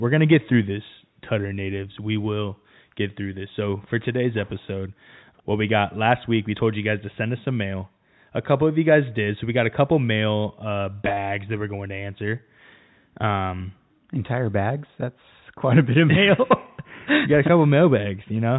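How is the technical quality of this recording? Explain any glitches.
There's one real glitch, a brief stutter in the telephone-coded speech. From 11.05 to 11.17 s there's packet loss with the last packet repeated: about 70 ms missing across 120 ms, longest run 30 ms. The receiver replayed stale audio, and the joins don't line up with the pitch, so you hear robotic buzzing that fits 10 ms packets.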